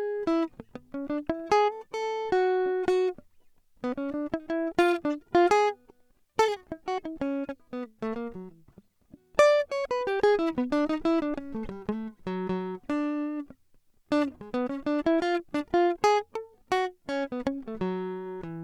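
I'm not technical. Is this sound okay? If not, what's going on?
Yes, this sound is okay; nothing is going wrong in it.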